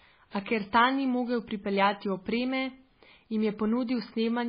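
From start to finish the speech sounds watery and swirly, with nothing at all above 5 kHz, which points to heavy MP3 compression at a very starved bitrate, likely around 16 kbps. The encoder has chopped the treble and is flickering weak detail on and off between frames.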